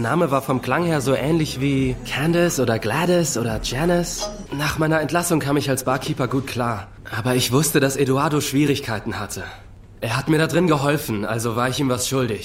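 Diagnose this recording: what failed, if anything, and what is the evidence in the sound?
Nothing in the sound points to a failure at any stage, so there's honestly nothing to diagnose in this recording.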